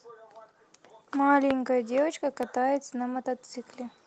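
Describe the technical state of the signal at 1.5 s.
A sudden voltage step or pulse, most likely from a plug, switch contact, static discharge or driver glitch, entered the signal chain between 1.51 and 1.53 s. The downstream circuitry shaped that pulse into a single loud pop that peaks roughly 20 dB above the speech. It lands as a sharp, brief crack over the talking, which carries on unbroken beneath it, alongside the light smoothing of the Opus voice compression in its hybrid mode.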